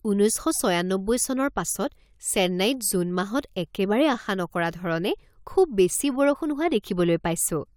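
No technical faults can be heard anywhere in the recording.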